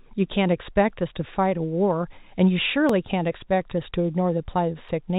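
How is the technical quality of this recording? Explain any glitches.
The speech has brief skips where a few milliseconds of audio are missing between chunks, at 0.90, 2.89 and 4.89 s. They are exactly 2.0 s apart, likely from chunked recording dropping audio at each changeover. The sides join with no silence, unlike random dropouts. The speech also has the narrow telephone band of G.711 coding.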